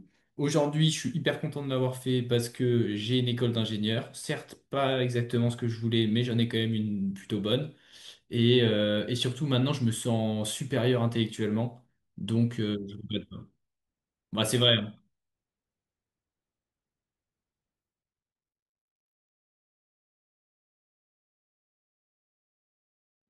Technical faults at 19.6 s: none

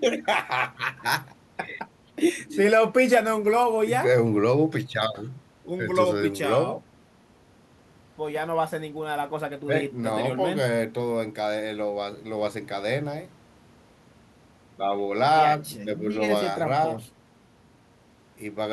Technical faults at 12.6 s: none

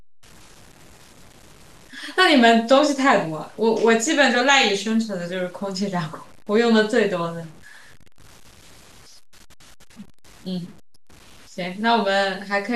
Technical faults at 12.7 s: low bit depth without dither

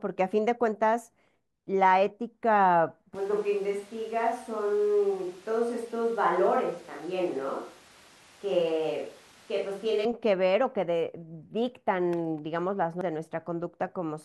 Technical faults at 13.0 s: damaged data in a compressed stream

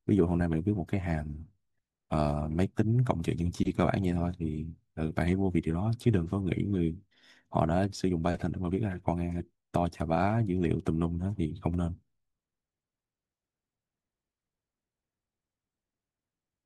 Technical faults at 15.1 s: none

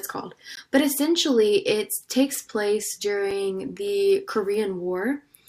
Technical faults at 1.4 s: none

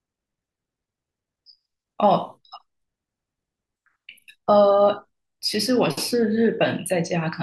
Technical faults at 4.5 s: none

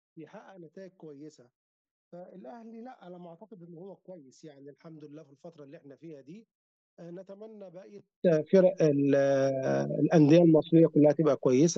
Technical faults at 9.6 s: none

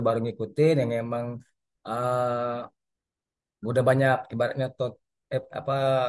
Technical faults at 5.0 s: none

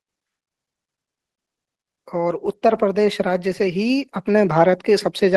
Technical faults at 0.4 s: none

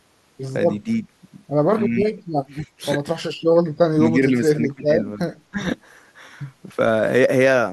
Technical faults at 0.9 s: speech suppressed in double talk

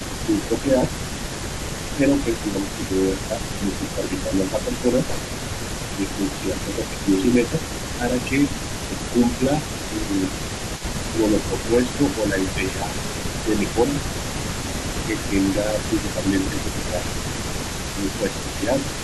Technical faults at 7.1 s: echo leak; speech suppressed in double talk

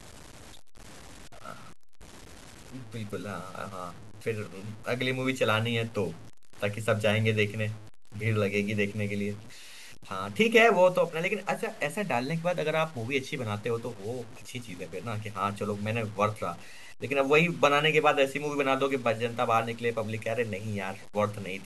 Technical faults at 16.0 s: low bit depth without dither

